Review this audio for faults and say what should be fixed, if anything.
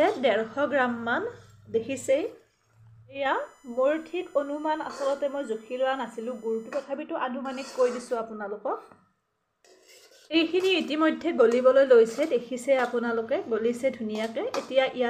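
USB whine, 3.26 to 6.83 s: a steady, fixed-pitch whine built on 1 kHz, loudest at its 7 kHz multiple and roughly 35 dB below the signal. The bus's 1 ms frame cycle draws current that leaks into the audio through shared power or ground. Prevent it by powering the interface separately or using an isolated USB hub.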